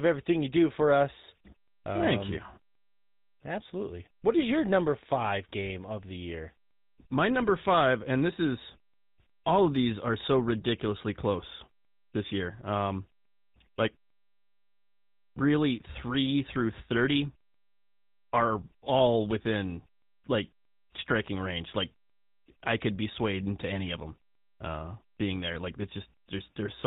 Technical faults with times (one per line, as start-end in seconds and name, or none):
0.00-26.86 GSM full-rate codec